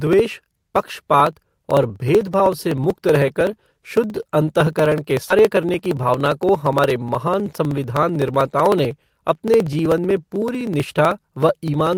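It's a speech clip with two problems close together. First, a skip ahead at 5.29 to 5.31 s: playback just jumps forward with no fill, and roughly 0.7 s of speech is gone. The audio on either side is butted straight together, which sounds like the jitter buffer overflowed and threw away a chunk while newer audio was already queued, dropping the latency by about that much in one go. Right after, from 5.39 to 6.91 s, there's a jitter buffer speed-up. The talker runs at about 108% speed without any pitch shift, so it comes across a bit rushed. The receiver is trimming tiny pitch-period-sized slices over and over to drain the remaining backlog, shaving off something like 0.15 s in total.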